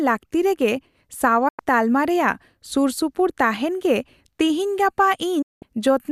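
A speech clip with two digital broadcast dropouts. The sound fades out in about 8 ms and goes silent from 1.48 to 1.59 s, then again from 5.42 to 5.63 s. The receiver muted on lost or corrupt frames. Whatever was sent in those gaps is gone.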